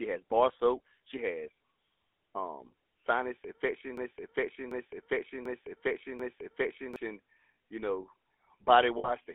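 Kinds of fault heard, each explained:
GSM full-rate codec: Speech runs through a vocal-tract model driven by a coarse, regularly spaced pulse excitation, so it has a buzzy, gravelly roughness throughout. The band is held to about 250 Hz to 3.5 kHz, which fits the 13 kbps GSM full-rate codec.
Broken-record loop: From 3.97 s to 6.96 s, just after "um sinus", a 740 ms fragment repeats back to back four times, and the speech that should have followed is lost. The likely cause is a stalled player or stream resending its last buffer.
Lost GSM frames: From 8.98 s to 9.11 s the decoder replaces damaged frames with the last good frame's parameters, giving a brief rough, metallic ring. The 60 ms gap fits three lost 20 ms frames.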